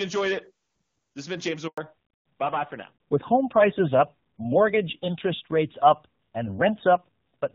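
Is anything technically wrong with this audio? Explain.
Yes, there are two faults, both around 1.7 seconds into this speech clip.

From 1.68 to 1.78 s there is a handover gap: the call was passed between networks and no speech frames arrived for about 100 ms. The voice cuts off abruptly and that stretch is silent, so whatever was said there is lost.

From 1.78 s to the end there is a fallback to narrowband. After the handover the call left HD Voice for an older narrowband codec, and the sound points to AMR-NB at around 7.4 kbit/s. Nothing above 4 kHz survives, so the voice turns duller, muffled and rougher than in the opening, wideband stretch.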